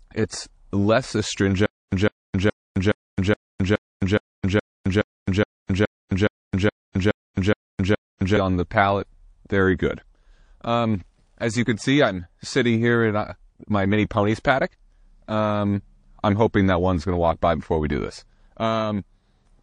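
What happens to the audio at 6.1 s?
A hiss rises about 23 dB just before an attack and blurs its onset, from 6.08 to 6.11 s, a 31 ms spread. This is pre-echo. The codec spread quantisation noise across a roughly 52 ms block, never switching to short blocks, so noise meant for the loud attack filled the quiet lead-in.

The moment also sits inside a stutter with silent gaps from 1.66 to 8.37 s. A 158 ms burst of speech repeats 16 times, each followed by 262 ms of digital silence, so it returns every 419 ms. The cause is likely a stalled stream replaying its last fragment and then running empty, losing the audio in between.

Throughout, the speech sounds watery and swirly, with smeared attacks and a dulled top end. That points to MP3 compression, likely at a low bitrate of around 40 kbps, where weak frequency lines blink on and off between frames and the treble is cut.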